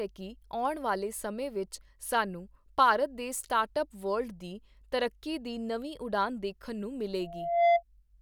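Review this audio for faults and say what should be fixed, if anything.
A loudspeaker feedback squeal appears from 7.19 s to 7.83 s, near the end of the speech. A single tone at 686 Hz swells over roughly half a second. It peaks about 10 dB above the speech. The microphone is picking up the loudspeaker it feeds. At 686 Hz the loop gain exceeds one, so that frequency keeps reinforcing itself and grows. To prevent it, reduce microphone gain, move the microphone away from or behind the loudspeaker, or notch out 686 Hz.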